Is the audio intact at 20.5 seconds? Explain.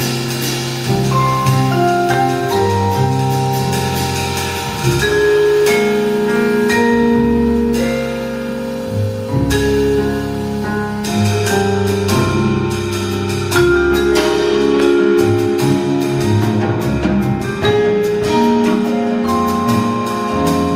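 Yes, at 20.5 seconds the audio is intact, with no dropout, click, distortion or other disturbance in the sound.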